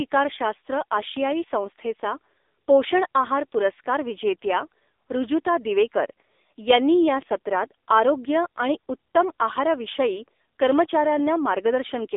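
Speech squeezed through an AMR narrowband mobile codec the whole way: nothing above 3.8 kHz, a 300 Hz to 3.7 kHz phone band, and heavy buzzy, synthetic damage that fits a low mode around 6.7 kbps.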